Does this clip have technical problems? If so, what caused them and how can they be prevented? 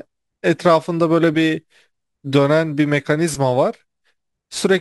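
Yes. The speech carries crude rate conversion throughout, heard as a faint gritty fizz riding on the louder and brighter sounds. The pattern fits a conversion from 48 kHz to 44.1 kHz done by simply dropping samples with no filtering. The irregular skips form a repeating error that produces inharmonic tones, roughly 30 dB below the speech. To prevent it, resample with a proper band-limited, anti-aliased converter.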